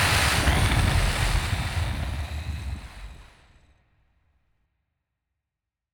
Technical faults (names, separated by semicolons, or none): none